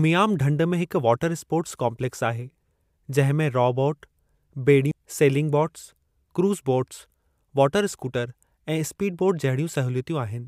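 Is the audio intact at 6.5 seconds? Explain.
Yes, the speech at 6.5 seconds is intact, with no dropout, click, distortion or other fault at that moment.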